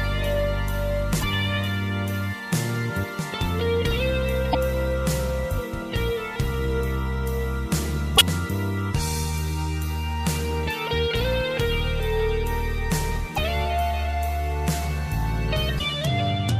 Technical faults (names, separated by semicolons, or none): damaged data in a compressed stream